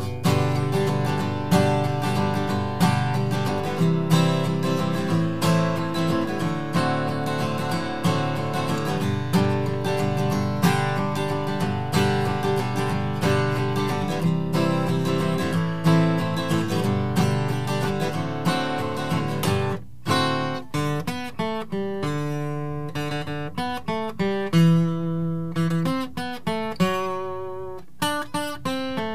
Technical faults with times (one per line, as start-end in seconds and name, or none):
none